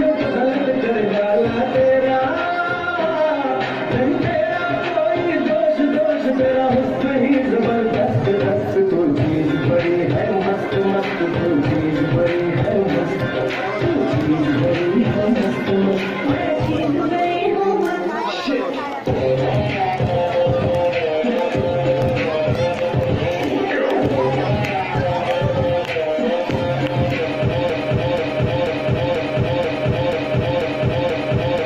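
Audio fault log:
27.70–31.66 s, broken-record loop: a 0.49 s fragment repeats exactly, back to back, eight times until the end, likely because playback stalled and kept resending its last piece, so the audio meant for that stretch never plays.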